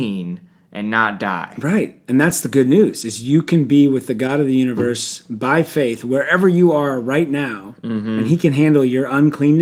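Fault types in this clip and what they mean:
Lost packet rebuilt from error correction, at 2.29 s, 4.27 s and 8.01 to 8.07 s: each missing stretch was filled from a low-bitrate copy carried in the following packet, so there's no gap, just brief roughness and noise; the 40 ms patch before "and he can" suggests two packets.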